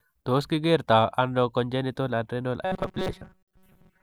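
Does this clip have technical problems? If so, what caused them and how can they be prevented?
Yes. From 2.63 s to the end, the speech becomes a rigid, metallic buzz at 188 Hz. This is robotic sound from repeated short buffers. It was likely caused by audio arriving too seldom, so each gap was filled by looping a slice of about 5.3 ms while most of the real signal was skipped. Unlike plain dropouts, nothing goes silent; instead, the repeats impose a buzz at a fixed rate. Prevent it by giving the audio path larger buffers or higher scheduling priority so new data arrives on time.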